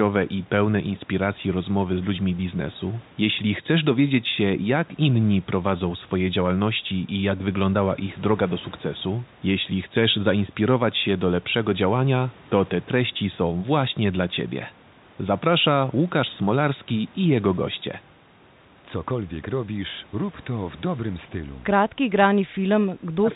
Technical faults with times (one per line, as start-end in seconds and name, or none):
22.02-23.35 speech suppressed in double talk